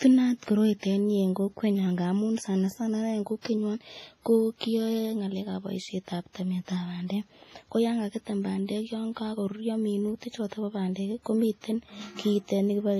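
Throughout the clip the speech was likely squeezed through Windows Media Audio compression. The damage fits an early WMA encoder working at around 24 kbps. At that rate the transform codec zeroes many weak spectral lines and spreads its quantisation noise across long blocks. The result is a ringing, washy tone with a hiss that swells and fades with the speech, and nothing survives above 15.4 kHz.

At 3.41 to 3.45 s, right after "sana sana ineii en", the same block-based coding causes pre-echo. A sharp attack landed late in a transform block. The noise sized for that loud onset was spread evenly over the whole block, so it also filled the quiet stretch before it. About 36 ms of hiss smears in ahead of the attack, which arrives soft and blurred rather than crisp.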